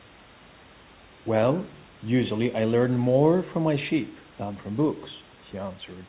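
No technical faults can be heard in the speech recording. The call path comes through as narrow telephone-band audio with nothing above 4 kHz, which fits a 64 kbps G.711 A-law codec, and the room's background noise sits about 29 dB below the speech.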